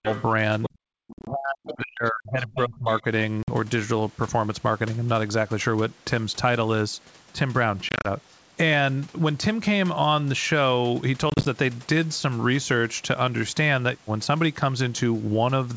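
Speech suppressed in double talk, from 0 to 0.08 s and again from 0.69 to 3.05 s: the talker's voice drops by around 40 dB in pieces, likely because the echo canceller turned down both sides while both were talking. Other side's voice leaking through, at 0.09 to 0.25 s, 0.62 to 0.69 s, 1.66 to 1.75 s, 2.56 to 2.62 s and 2.92 to 3.02 s: a second voice surfaces about 10 to 20 dB below the speech, likely loudspeaker echo that the canceller did not fully remove. Packet loss on an ADPCM call, at 1.13 to 1.28 s, 3.43 to 3.50 s, 7.89 to 8.07 s and 11.30 to 11.47 s: hard-edged silent gaps totalling 50 to 110 ms each, mostly scattered in runs no longer than 50 ms. The speech then resumes slightly distorted while the decoder's predictor and step size resynchronise.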